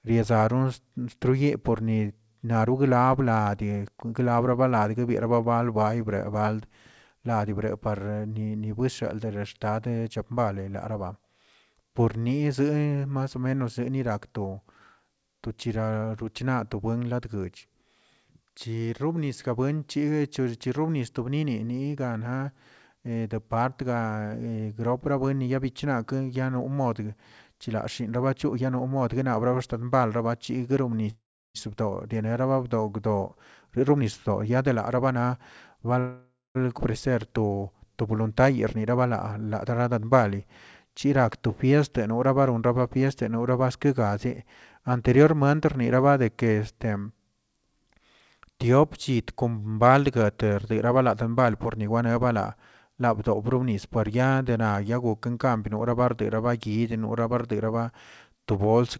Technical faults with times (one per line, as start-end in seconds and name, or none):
31.10-31.57 call audio freeze
33.68-35.92 jitter buffer speed-up
35.99-36.57 call audio freeze
36.79-36.82 skip ahead
38.12-40.18 jitter buffer speed-up